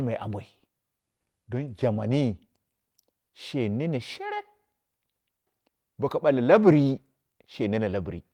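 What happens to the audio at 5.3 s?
Nothing goes wrong at 5.3 s; the speech carries on intact through that moment, with no dropout, click or distortion.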